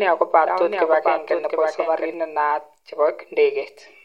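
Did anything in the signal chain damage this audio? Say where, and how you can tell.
Yes. From the very start of the speech to 2.14 s there is a doubled audio track. A second copy of the same sound trails the original by roughly 0.7 s, about 5 dB quieter. It is full-band, with no decay or room colour, so it is not an echo. At 2.14 s it stops abruptly. The likely cause is at the capture or routing stage, where a slower second path picked up the same signal and was mixed back in.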